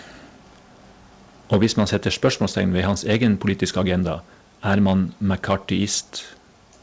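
Speech, with microphone overload from 1.52 to 2.28 s, peaks about 8 dB past the converter's limit with roughly 3% of samples flattened, likely from input gain set too high. Shorter clipped bursts follow at 3.10 to 3.28 s (about 3 dB over) and 5.51 to 5.55 s (about 4 dB over). At 1.54 s the microphone volume steps down by about 4 dB, dropping speech and background together right after the first distorted peak, likely the call software's automatic gain control reacting to the clipping. Nothing reaches above 8 kHz, consistent with a wideband call path such as G.722.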